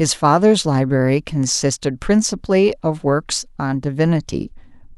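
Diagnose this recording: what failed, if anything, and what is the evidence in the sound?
Nothing in the speech points to a failure anywhere along the chain, so there's no fault to diagnose here.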